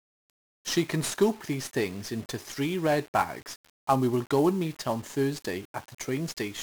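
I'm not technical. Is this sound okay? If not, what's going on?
No. 1-bit DFPWM compression affects the whole recording, from start to finish. This method saves only a single on-or-off signal per moment of sound. Each one nudges a running level up or down, so the level is always chasing the real sound and missing slightly. Those constant small misses become a heavy, fuzzy crackle over the speech, and the crisp upper sounds are swamped by hiss.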